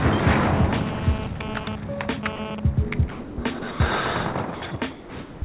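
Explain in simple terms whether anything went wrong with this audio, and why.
From 0.44 to 2.60 s a hard, raspy buzz sits on top of the sound, pitched around 217 Hz and full of gritty overtones. It cuts in and out rather than holding steady. This is GSM phone buzz: a 2G mobile phone close to the equipment was sending data in short radio bursts 217 times a second. The audio circuitry picked up those pulses and turned them into an audible buzz that has nothing to do with the recording itself.

There are also seven brief moments where the sound vanishes and is replaced by an even hiss or near silence: 1.64–1.67 s, 2.36–2.39 s, 3.11–3.38 s, 3.59–3.62 s, 3.71–3.80 s, 4.55–4.61 s and 4.91–5.42 s. These are sound dropped by the voice detector, likely because the sending side mistook quieter passages for background and paused transmission. The receiving end then filled each gap with comfort noise until the detector picked the sound up again. 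The call line carries nothing above 4 kHz, which adds a narrow telephone quality.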